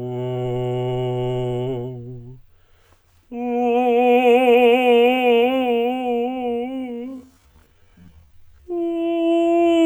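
It's a music clip, and at 4.76 s it hits a time-stretched section that runs right to the end at 9.85 s. The pace suddenly drops to half speed while the pitch stays put, so everything after that point drags. That's likely software stretching the audio to fill a longer slot, holding pitch steady by repeating short slices of the sound rather than just playing it back slower.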